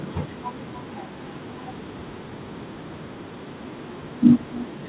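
From start to end, the speech carries an echo with no canceller. The far loudspeaker leaks into the microphone and nothing removes it, so each phrase returns about 26 dB quieter roughly a third of a second later. A spectrogram shows faint trailing copies of every syllable, stopping at 4 kHz.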